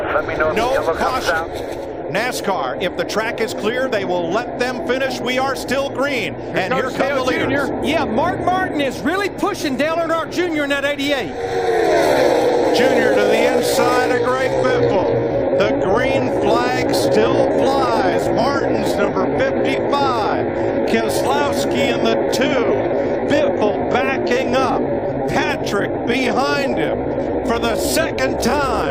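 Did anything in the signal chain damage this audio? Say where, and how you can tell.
Yes. From 12.96 s to the end is a time-stretched section: the pace slows to 0.69x at unchanged pitch, so it drags, likely from software repeating short segments.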